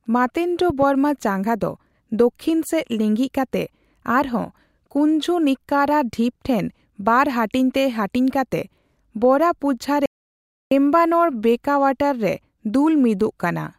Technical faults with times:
0.70-0.85 loud pop
10.06-10.71 audio dropout to silence

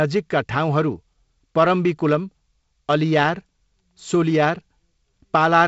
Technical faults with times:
none

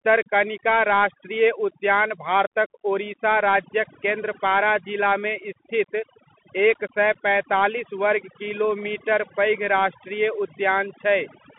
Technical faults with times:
0.00-11.59 overdone noise removal
0.00-11.59 Bluetooth CVSD headset codec

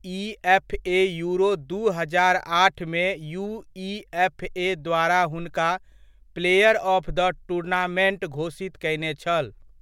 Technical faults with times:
none

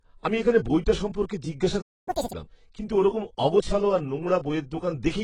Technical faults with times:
0.00-5.24 AAC compression
1.81-2.08 playback stall
2.08-2.33 catch-up at higher speed

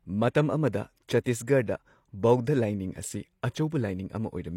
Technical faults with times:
1.24-1.26 pre-echo
3.70-3.72 pre-echo

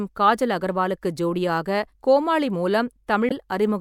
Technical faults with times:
3.28-3.32 damaged data in a compressed stream

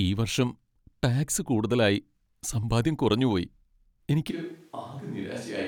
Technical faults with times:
4.31-5.67 switch to a distant microphone

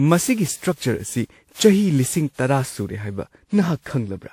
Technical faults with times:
0.00-4.33 generation loss

